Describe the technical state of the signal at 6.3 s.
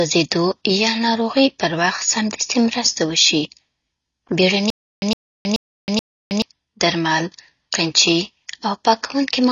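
At 6.3 s the signal is inside a stutter with silent gaps, running from 4.70 to 6.42 s. A 111 ms burst repeats four times, each followed by about 319 ms of digital silence, a 430 ms cycle. This likely comes from a stalled stream replaying its last fragment at each retry. The audio due in that span is lost.

AAC compression damage is also plainly audible here. Nothing sounds above 6.9 kHz, and the sound is dull and smeared, with a warbling texture. This likely points to AAC-LC at a low bitrate around 24 kbps.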